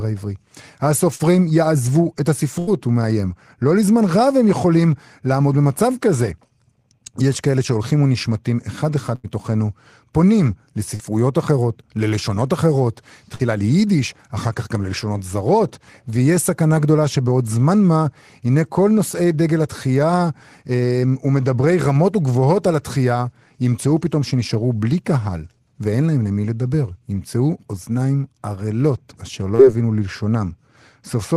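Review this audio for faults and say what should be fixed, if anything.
Short concealed packet loss: about 40 ms of audio failed to reach the decoder in time at 1.15–1.22, 10.96–11.03, 13.36–13.42 and 29.55–29.62 s. Each time the receiver covered the hole by extending the preceding sound, which leaves a brief smear or wobble before the real speech blends back in. Enabling in-band forward error correction or a slightly deeper jitter buffer would let these isolated losses be recovered rather than guessed at.

Burst of packet loss: two runs of lost or late packets, each about 80 ms, at 2.59–2.70 and 9.15–9.27 s left the decoder with nothing to play. It stretched the last sound and faded it into a held buzz or hiss, and the speech resumes further along with that stretch gone. Prioritising the call traffic on the network and adding redundancy that spans consecutive packets would keep bursts like these from cutting pieces out of the speech.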